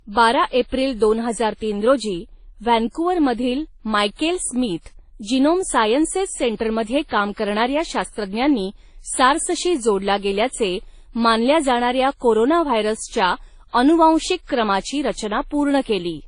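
Transcoding between lossy codecs runs from start to finish. Nothing in the speech reaches above about 10.1 kHz, and two layers of coding damage are heard together. The likely cause is a low-bitrate encode, one that fits WMA at around 32 kbit/s, re-encoded to Vorbis at a similar rate. The second codec spends scarce bits on the first codec's artefacts and adds its own, while the earlier band limit remains.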